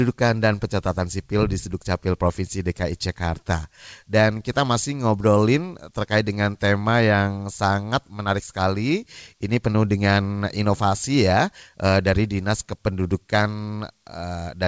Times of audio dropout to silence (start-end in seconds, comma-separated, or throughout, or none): none